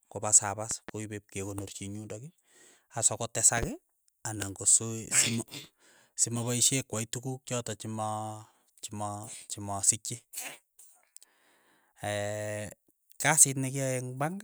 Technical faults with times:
0.71-0.91 loud pop
3.57-3.65 loud pop

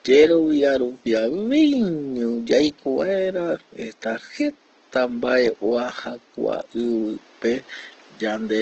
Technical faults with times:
0.00-8.62 Opus compression

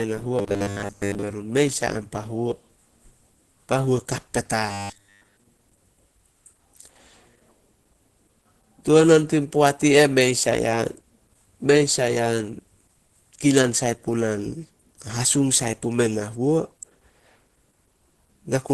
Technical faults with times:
0.00-18.73 Opus compression
0.39-1.23 robotic sound from repeated short buffers
4.72-5.37 robotic sound from repeated short buffers

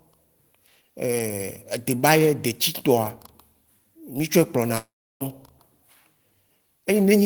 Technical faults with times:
4.77-5.22 long network dropout

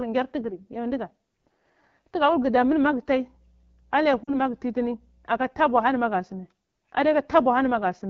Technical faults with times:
0.00-8.09 AMR wideband (HD Voice) codec
3.21-5.43 mains hum
4.23-4.34 lost AMR speech frames

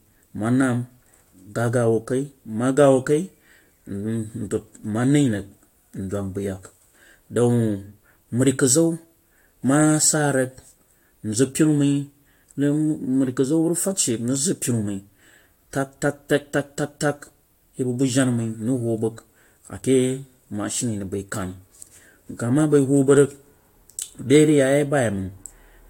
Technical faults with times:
none

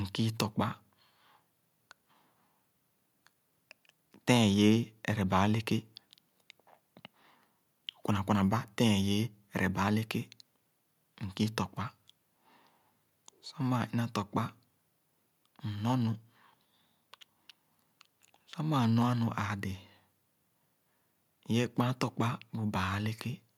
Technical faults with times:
none

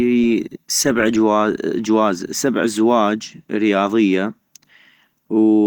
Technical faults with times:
none

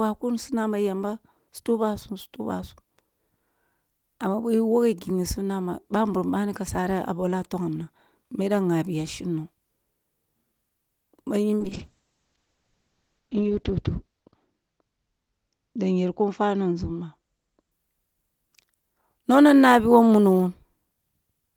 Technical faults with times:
11.60-17.77 call bitrate drop

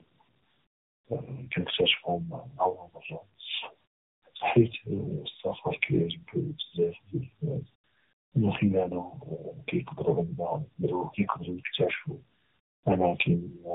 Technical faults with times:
0.00-13.74 tandem speech coding

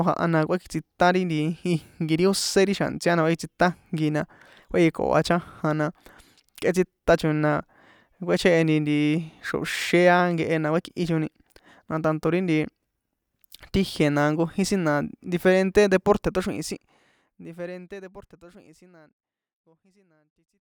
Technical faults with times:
none

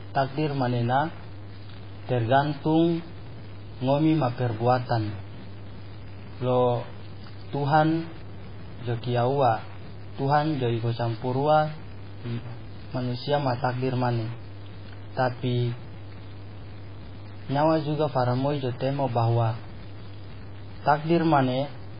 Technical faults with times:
0.00-21.99 low bit depth without dither
0.00-21.99 MP3 compression

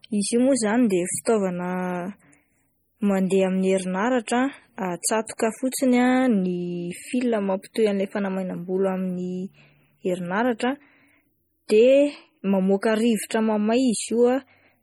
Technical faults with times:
0.00-14.83 MP3 compression
1.25 pre-echo
5.71 pre-echo

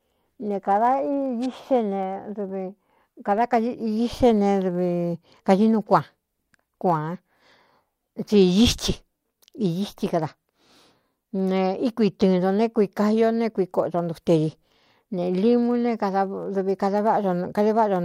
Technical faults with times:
0.00-18.05 block size mismatch (truncated)

